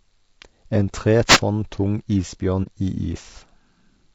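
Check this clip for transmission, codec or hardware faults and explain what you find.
Three faults are audible in this speech clip, one spanning the whole recording and two brief events.

Throughout, the voice sounds rough and grainy, with noise filling the gaps between harmonics and a thin, synthetic top band. This is likely low-delay AAC compression: AAC-ELD's short frames resolve pitch poorly, and the damage points to a bitrate around 32 kbps.

From 1.26 to 1.40 s, a short swish of static is heard. This is a wireless microphone noise hit, where the FM radio signal faded and receiver noise rose through it.

From 2.63 to 2.69 s, the sound fades out and back in as a brief dip. This is AAC frame loss with muting. About 30 ms of audio, consistent with a single lost frame, was decoded as silence, and the overlapping windows smoothed both edges.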